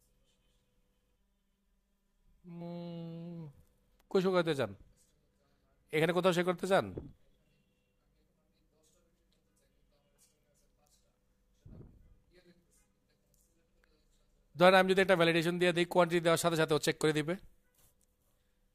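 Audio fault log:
1.16–2.61 s, channel delay (comb filtering): hollow, phasey sound as one channel lags roughly 5 ms behind the other, cutting regular notches from around 100 Hz upward.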